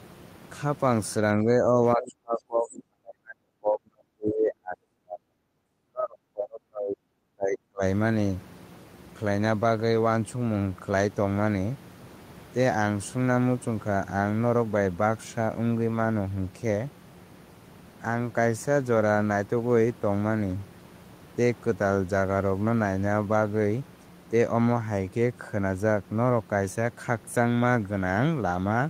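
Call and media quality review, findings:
Speech suppressed in double talk, 1.44–1.66 s: brief dip, a few dB. Then 1.95–5.44 and 5.85–7.82 s: talker ducked hard, up to about 40 dB, likely echo canceller clamping both sides.

Other side's voice leaking through at 2.06–2.11 and 2.76–2.82 s: faint far-end scraps, about 20 dB under speech, likely residual echo the canceller missed. Room noise sits about 22 dB below speech.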